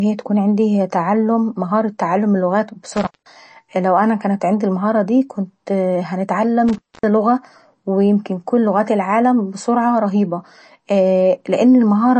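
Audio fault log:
throughout: MP3 compression. Nothing is heard above 8.3 kHz, and the treble has a watery, swirling quality, with s sounds chirping and consonant onsets smeared. This is likely heavy MP3 encoding, consistent with roughly 34 kbps: the encoder cuts high frequencies and drops weak spectral components frame by frame.
2.97–3.36 s and 6.68–7.03 s: intermittent contact. The signal cuts out for 0.19 s after "تعلم مهارة تعلم اللغات", before "لان انا لو كان", then for 0.25 s just before "لغة ويمكن كل اللغات". Crackle marks each break and faint hiss remains, as a loose connection briefly opens.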